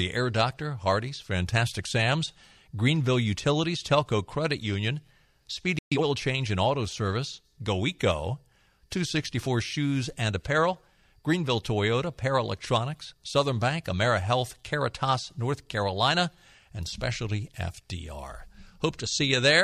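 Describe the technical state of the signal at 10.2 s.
At 10.2 s the speech signal is intact, with no technical fault audible at that moment.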